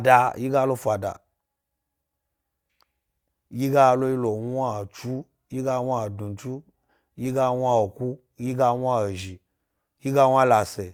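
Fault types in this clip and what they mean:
No faults detected: the speech carries no audible dropouts, glitches or level problems anywhere in the recording.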